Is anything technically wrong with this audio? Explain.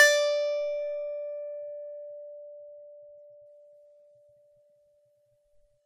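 No, nothing technically wrong is audible in this music.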